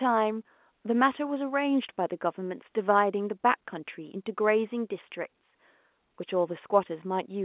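No technical faults can be heard anywhere in this speech recording. The telephone path is working as it should, with A-law G.711 coding at 8,000 samples a second, which keeps the band below 4 kHz and leaves only a faint quantisation hiss that rises and falls with the level.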